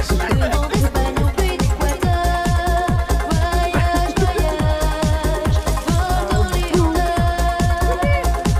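No technical faults are audible.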